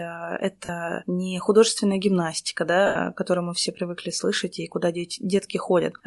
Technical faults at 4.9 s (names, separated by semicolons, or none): Bluetooth LC3 compression